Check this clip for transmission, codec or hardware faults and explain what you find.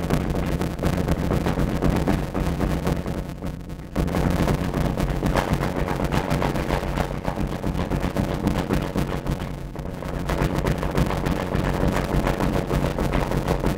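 There is one fault, present throughout the clip: a block size mismatch (padded). One stage writes shorter blocks than the next reads, and zeros fill the remainder. Each block carries a brief gap, giving a buzz near 91.9 Hz. Playback runs at 0.533 times normal speed, with pitch roughly unchanged. That fits 256-sample blocks read as 480-sample blocks.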